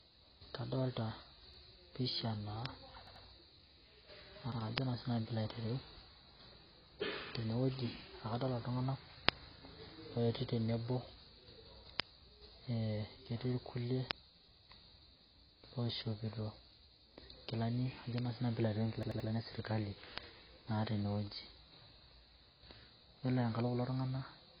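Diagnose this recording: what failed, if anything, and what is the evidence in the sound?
AAC compression throughout, at the codec stage: nothing above 5.5 kHz and heavy smearing, likely from AAC-LC at about 16 kbps discarding detail to meet its budget.

Repeated buffer at 1.54, 3.07, 4.52 and 19.03 s, in the driver or buffer stage: 85 ms chunks replay once to three times with hard joins, which fits a 4096-sample buffer.

Bit error spike at 2.66, 4.78, 9.29, 12.00, 14.11, 18.18 and 20.18 s (just before "naa tene wueji"): isolated broadband ticks where one to three corrupted samples jump and return.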